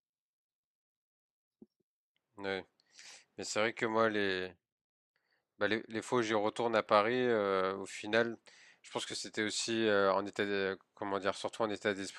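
Repeated buffer at 3.46, 6.87 and 9.11 s: each time fresh audio arrived late, so the playback device sent the previous block out a second time, which fits a 10 ms buffer. Every repeat is a brief hard-edged click in the speech, with essentially nothing missing afterwards.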